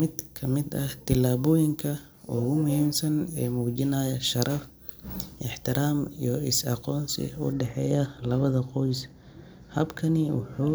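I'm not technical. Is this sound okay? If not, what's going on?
No. From the start to about 7.5 seconds, pre-emphasis was left on: the treble was boosted on the way in, the way FM radio does it, but the matching cut was never applied. The speech sounds thin, harsh and overly hissy on its s sounds.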